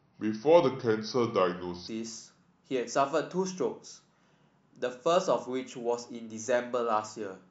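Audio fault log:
0.00–1.88 s, section at the wrong speed: the opening stretch of speech plays at 0.8 times its proper rate, so it drags and sits about four semitones low. Pitch and tempo fall together because the samples are simply read out more slowly, which stretches every waveform cycle as well as every syllable. At 1.88 s the speech snaps back to normal speed and pitch. This is likely a playback or editing clock mismatch applied to that section alone.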